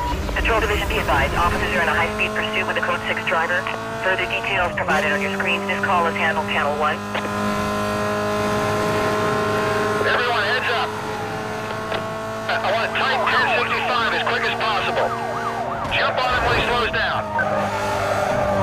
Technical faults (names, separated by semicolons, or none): none